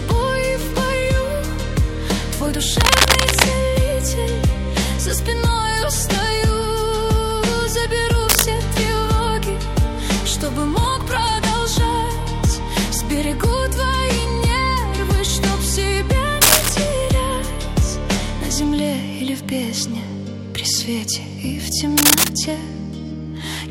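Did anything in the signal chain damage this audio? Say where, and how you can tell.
Yes. In the analogue wiring, a worn cable or connector is likely shifting and its contact changing, causing cable scratch noise: rough scratching bursts, louder than the sound itself, at 2.80–3.43, 8.29–8.45, 16.41–16.72 and 21.97–22.29 s.

In the buffer processing, a filter restarted on every block resets its state each block, so 10.32–11.47 s carries a 100 Hz buzz of ticks tracking the level, which fits 10 ms blocks.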